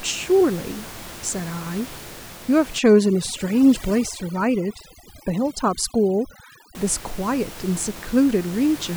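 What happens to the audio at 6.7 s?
Overdone noise removal, running from 2.79 s to 6.75 s, ends there. Bands near the noise floor are gated off, taking quiet parts of the voice with them and leaving twinkling specks, unlike the room noise, about 17 dB below speech, that returns.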